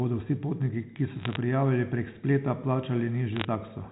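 A speech clip carried over a G.711 A-law phone path, band-limited below 4 kHz, with two bursts of bit errors on a digital phone line: crackle from 1.2 to 1.36 s and again from 3.36 to 3.45 s. Flipped bits, a few per thousand, each corrupt one sample, and hits on the sign or high bits produce sharp ticks. On a waveform these appear as isolated single-sample spikes. A spectrogram shows thin vertical broadband lines within those spans.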